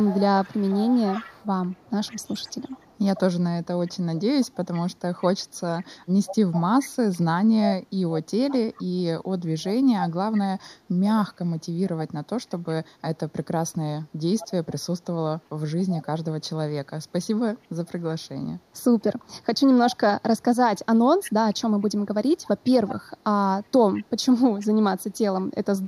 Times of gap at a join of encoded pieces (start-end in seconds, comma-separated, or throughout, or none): none